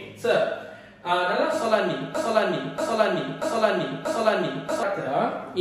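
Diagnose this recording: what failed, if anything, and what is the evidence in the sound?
A broken-record loop from 2.15 s to 4.83 s, most likely a stall in playback or the stream buffer that kept resending the last fragment it held. A 0.64 s piece repeats exactly four times back to back, and the audio due in that span is lost.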